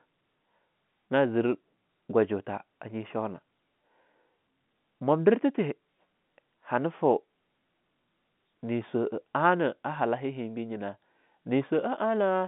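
No technical faults are audible in this speech recording. It has the sound of an ordinary telephone line carried over G.711 telephone coding, with the band running from about 150 Hz to 3.7 kHz, nothing present above about 3.8 kHz, and a character that fits A-law coding at 64 kbps.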